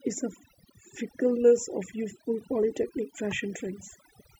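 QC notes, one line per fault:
Throughout: overdone noise removal. Heavy spectral gating kills bands near the noise floor, leaving near-silent gaps with twinkling specks and a speckled, holed spectrogram.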